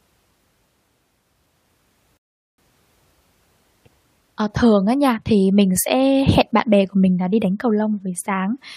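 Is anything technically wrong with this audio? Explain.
Yes. At 2.17 s the speech halts in a rebuffering stall lasting until 2.58 s. The player exhausted its downloaded audio and paused until more data arrived, then carried on from the exact point where it stopped. Nothing is skipped, but about 410 ms of dead air is inserted. On a waveform this shows as a flat line with abrupt edges; on a spectrogram, a clean vertical gap with no energy at any frequency.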